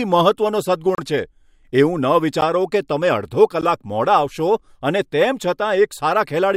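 A short hole in the speech falls at 0.95 to 0.98 s (about 32 ms), and ticks fall at 2.41 s and 3.61 s. These are blocks of digital silence: the sound cut out with no fade, as when output buffers go unfilled in time.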